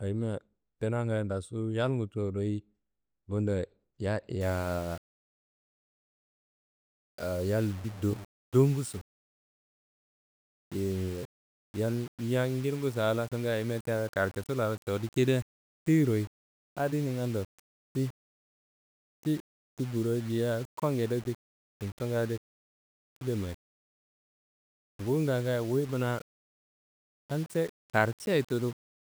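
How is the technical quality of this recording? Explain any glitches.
The recording degrades from 4.41 s to the end. Over that span the speech turns grainy: low bit depth without dither, likely rounding to about 6 bits. The error tracks the signal, so quiet syllables sputter and grit, with distortion only around 25 dB down. Waveforms show staircase steps; spectrograms show broadband hash pulsing with the speech.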